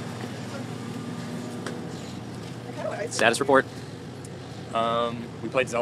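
A time-stretched section runs from 1.78 s to the end at 5.81 s, where the audio suddenly plays about 1.76 times faster while its pitch stays put, sounding rushed. This is likely software dropping short slices to shorten that stretch while preserving pitch.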